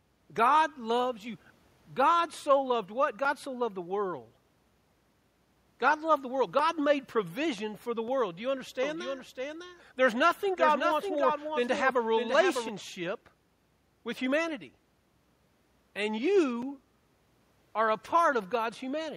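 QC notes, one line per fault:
8.83–12.69 s, doubled audio track: a second, slower capture path or a misaligned edit likely left two copies of the speech in the mix, the extra one trailing by roughly 0.7 s at about 5 dB below the original. The late copy is full-band and dry, with no decay or room colour. Over this stretch every syllable returns as a flat, distinct repeat, and the copy cuts in and drops out abruptly at the range edges.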